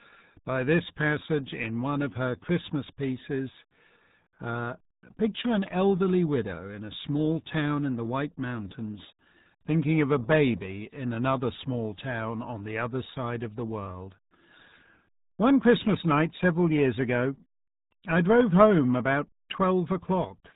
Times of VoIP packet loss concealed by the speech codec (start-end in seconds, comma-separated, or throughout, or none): none